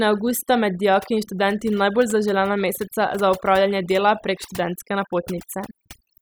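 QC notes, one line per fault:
Throughout: overdone noise removal. Background drops and breaks up into twinkling specks. Noise reduction set too aggressively is gating whole frequency bands near its noise estimate, taking quiet speech detail with them.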